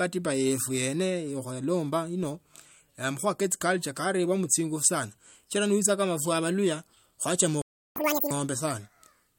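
Right after "ifwe abaluhya kwachama", at 7.62 s, the speech cuts out for 0.35 s until 7.96 s. This is a playback stall, likely the player starving for data. The waveform drops to a flat line and the spectrogram shows a blank vertical gap.

From 7.96 to 8.31 s comes catch-up at higher speed. The buffered backlog is resampled at 2× speed, so the voice rushes and rises about ten semitones. The spectrogram's harmonics jump upward and compress in time, and the waveform cycles pack tighter before returning to normal.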